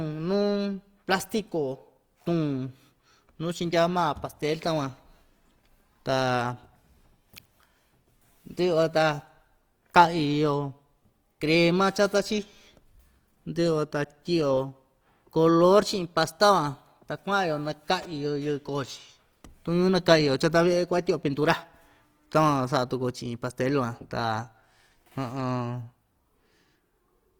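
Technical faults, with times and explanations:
Throughout: Opus compression. The speech sounds plainly grainy and rough, with a noisy fizz instead of swirling holes, while the band stays full up to 20.3 kHz. This is likely Opus in CELT mode refilling bit-starved bands with noise, consistent with roughly 24 kbps.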